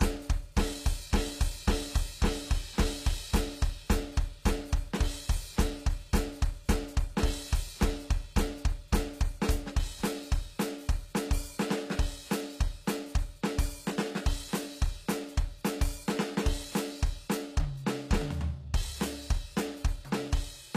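Throughout the music, the treble sounds gritty and metallic, with nothing above 14.9 kHz, which points to a low bitrate around 24 kbps. This is likely HE-AAC compression: upper bands are copied from lower ones, so high harmonics misalign with the true content.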